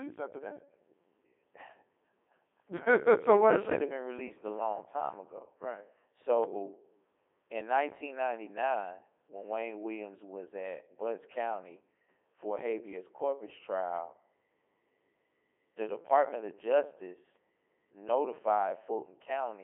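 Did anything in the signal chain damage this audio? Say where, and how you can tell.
Yes, at the codec stage: Codec 2 vocoder damage runs through the whole speech clip, heavy and robotic, with nothing above 3.8 kHz and a 300 Hz to 3.6 kHz band that fits the 3.2 kbit/s mode. Unlike plain telephone band-limiting, the waveform itself is resynthesised from sine waves, hence the buzz.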